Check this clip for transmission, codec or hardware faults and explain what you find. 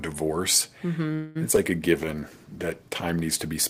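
Yes, there are a few network-side problems, all packed into the middle of this speech clip, with four kinds of fault showing up.

From 1.13 to 1.37 s there's a call audio freeze. The last sound gets stretched into a fading buzz for about 218 ms, then speech resumes exactly where it stopped with nothing lost. That's likely packets stalling in transit until the jitter buffer ran dry.

Right after, at 1.51 to 1.54 s and again at 1.56 to 1.59 s, come two short concealed packet losses. About 40 ms and then 20 ms of audio never arrived in time, so the decoder papered over each hole by extending the preceding sound and crossfading back. You hear quick smears. The first one also trims the built-up delay by roughly 40 ms.

At 1.99 s a call bitrate drop kicks in. The encoder falls from 32 to 14 kbps after the bandwidth estimate sank, and it sits at that floor for about 1.2 s. Coarser coding makes the speech rough and a bit muffled until it recovers around 3.28 s.

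Overlapping that, from 2.05 to 2.3 s, there's a jitter buffer slow-down. The receiver repeated pitch periods to rebuild its reserve, adding about 49 ms. Speech runs at roughly 84% speed with unchanged pitch, so it sounds drawn out.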